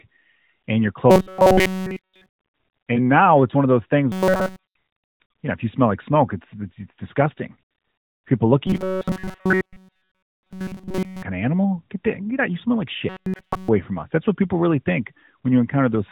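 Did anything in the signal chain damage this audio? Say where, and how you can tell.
Yes: robotic sound from repeated short buffers, likely a driver or buffer underrun, at 1.10–2.29 s after "and your", 4.12–4.74 s, 8.67–11.23 s before "kind of animal", and 13.09–13.68 s between "smell like" and "from us". Each stretch loops a roughly 5.3 ms slice throughout, stamping a fixed 188 Hz buzz on the sound. Codec buzz would track the voice's own pitch across the whole clip, not appear in bursts at one rigid pitch.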